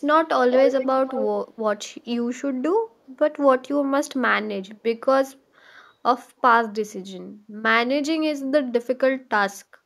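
From 0.5 to 0.88 s, a delayed copy of the speech trails the original by about 189 ms. It returns from 1.07 to 1.24 s with the same delay. This is echo leak. The copy is only a little quieter than the speech itself. The likely cause is a loudspeaker on the far end whose echo canceller failed to remove what its microphone caught, so the sound was sent back.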